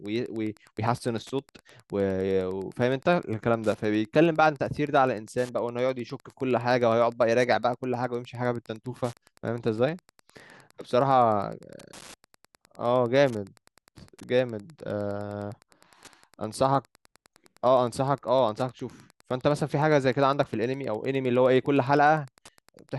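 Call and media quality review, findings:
Wi-Fi interference, whole clip. Nearby Wi-Fi radio coupling into the analogue audio path; the circuit rectifies the RF bursts. Beacon every 102.4 ms gives a steady tick near 10 per second under the speech, with irregular rasps between ticks during data traffic. Level roughly 35 dB below the speech: faint. Probable component: the audio circuit near the radio.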